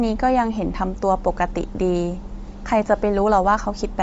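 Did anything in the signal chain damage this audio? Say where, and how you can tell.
Yes. Bluetooth LC3 compression runs throughout the clip and is plainly audible. The speech has a breathy, grainy edge, and there is nothing above 7.7 kHz, so the top of the band is simply missing. The likely cause is the codec stage. LC3 transforms each frame into frequency bins. At a tight budget, which here fits about 32 kbps with 10 ms frames, it discards upper-spectrum detail and substitutes shaped noise, producing this rough texture.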